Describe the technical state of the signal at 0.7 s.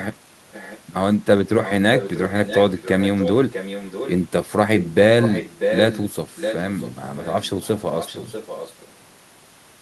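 Echo leak, 0.52 to 0.8 s: an echo canceller likely let loudspeaker pickup through, so a faint copy of the speech trails 0.64 s behind.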